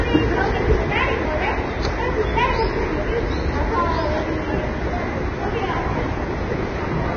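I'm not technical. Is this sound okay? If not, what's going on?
No. Throughout it sounds dull, hissy and grainy, with nothing above 6.5 kHz, likely from heavy Vorbis compression turning fine treble into noise.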